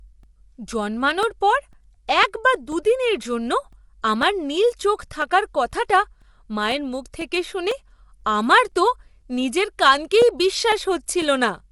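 Right from the start, the speech has a rough, grainy texture with noise filling in between the harmonics, and there's nothing above 11.6 kHz. That's likely low-delay AAC compression, AAC-ELD as used on video calls, whose short frames smear pitch detail at a low rate, around 32 kbps by the sound of it.

From 0.23 s to 11.22 s there are periodic USB or driver dropouts: a tiny gap of silence, roughly 2 ms, every 0.5 s, about twenty in all. Something is stalling the bus or driver on a schedule, so you hear a steady tick pattern whenever there's signal.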